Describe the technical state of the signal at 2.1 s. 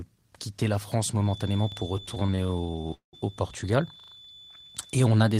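At 2.1 s two faults overlap. A feedback whistle runs from 1.14 s to the end of the clip: a thin, steady tone at 3.5 kHz, about 25 dB below the speech, swelling and fading slowly in level. It is likely a loudspeaker-to-microphone loop held just at the edge of feedback, so one frequency keeps ringing without building up. Unlike mains hum, it sits high in the spectrum and has no harmonic ladder beneath it. Unlike runaway howl, it stays at a low level instead of growing.

The moment also falls inside a stretch of repeated stalls (stutter), from 1.97 s to 3.15 s. Packets arrived late or slower than playback, so the jitter buffer kept running dry, 25 times in this span. Each time, the receiver extended the last bit of sound, and it faded that sound during the longer waits, the longest being 190 ms. Those fills add up to 494 ms, about 42% of the span, and nothing is actually lost. That separates it from dropouts: the speech drags and repeats rather than cutting to silence or skipping ahead.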